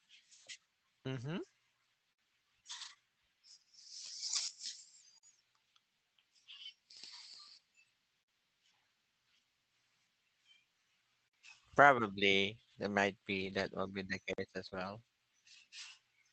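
At 2.13 s the first gap between chunks appears: a 50 ms hole, recurring every 3 s at 5.18, 8.23, 11.28 and 14.33 s. From 2.81 to 2.91 s three lost packets are rebuilt from error correction. The decoder played the low-bitrate Opus copies, so there is no gap, but 60 ms sounds rougher and noisier. A short concealed packet loss follows at 2.93 to 2.97 s, where 20 ms of missing audio was extrapolated and blended back in, heard as a brief smear. From 13.29 to 13.67 s, between "there might" and "will be the", 200 ms of rebuilt audio carries that same grainy, noisier texture against the 8 kHz band of the call codec. At 14.33 s, just after "will be the", comes the last chunk gap. At 14.69 to 14.74 s another concealed loss smears the sound, and the error-correction copy from 14.74 to 14.76 s adds a further 20 ms of roughness.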